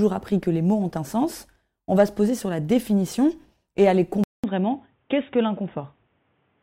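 At 4.24 s, after "la définition et aller", a 200 ms gap is followed by speech cut above 3.8 kHz over a faint new noise floor, likely an input switched to a poorer device rather than a filter.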